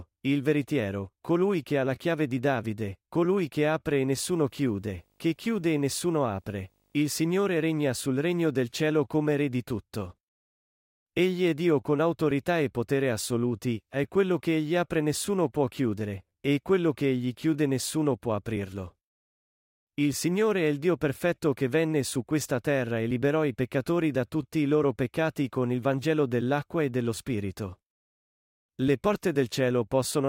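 Speech, with video or display buzz from 4.3 to 7.1 s, after "colui che apre e". A 50 Hz field-rate buzz, hash, and a faint 15.6 kHz line tone sit far below the voice.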